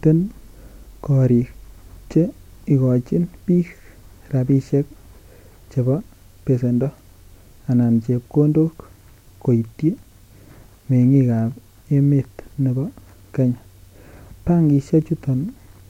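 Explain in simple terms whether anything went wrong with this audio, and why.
Nothing went wrong here.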